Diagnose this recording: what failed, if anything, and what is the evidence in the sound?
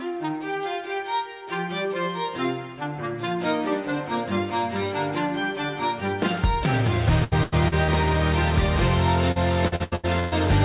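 Repeated packet loss (robotic sound) at 7.24–7.91 s and again at 9.32–10.35 s, a network fault. Packets arrived late or not at all. The jitter buffer bridged each hole by extending the last sound, so the audio turns choppy and robotic. The first stretch has four gaps (longest 85 ms, about 35% concealed). The second has six (longest 121 ms, about 39%). Throughout, nothing sounds above 4 kHz, which fits a narrowband G.711 call path.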